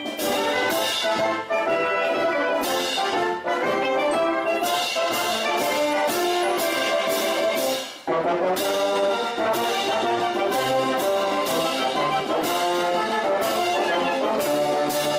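No technical faults can be heard anywhere in this audio.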